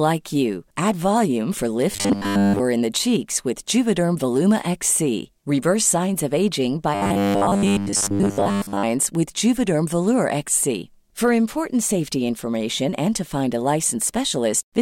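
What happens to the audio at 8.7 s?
At 8.7 s the speech is near the end of a robotic stretch from repeated short buffers (6.95 to 8.85 s, just after "signs of aging"). The likely cause is that roughly 10 ms of audio is replayed over and over, so it fuses into a rigid 100 Hz buzz rather than an audible stutter.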